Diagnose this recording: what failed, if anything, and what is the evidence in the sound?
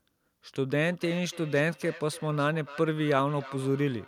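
Call processing failed: a feedback echo between two devices. A second device in the same room replays the call into a microphone whose echo canceller ignores it. From 0.82 s to the end, the speech returns roughly every third of a second, about 18 dB below the original.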